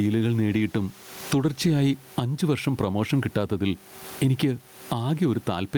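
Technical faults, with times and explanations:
Throughout, gain pumping: the input gain is likely set far too high for the microphone, so a fast limiter or compressor keeps hauling it down whenever the speech gets loud, swinging the level by around 20 dB. The room noise sits about 35 dB under the speech. Loud and quiet passages land close together, leaving the speech sounding squashed.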